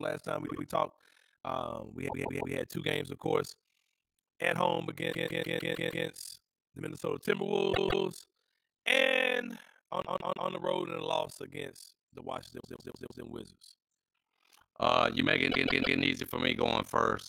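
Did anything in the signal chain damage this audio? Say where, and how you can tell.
Yes, overlap-add ripple in frame-based processing: throughout the speech, level dips about 60 dB roughly 40 times a second. That steady, frame-locked flutter rules out irregular dropouts.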